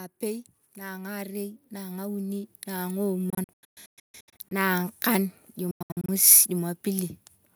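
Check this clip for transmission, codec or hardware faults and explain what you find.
Two things stand out: an automatic gain rise at the start, then two stretches of choppy gaps later on.

From 0.19 to 3.09 s the automatic gain control is rising. It judged the input too quiet and slowly pushed its gain up by about 11 dB, so the speech and the room noise swell together over those three seconds.

Then from 3.30 to 4.52 s the speech breaks up into hard-edged silent holes, about 0.7 s lost in total across 1.2 s, the longest gap 139 ms. It happens again from 5.71 to 6.09 s, 255 ms lost over 0.37 s, longest 93 ms. The likely cause is Bluetooth dropout. Packets miss their delivery window to the headphones, the output goes silent, and the speech picks up further along as though it never paused.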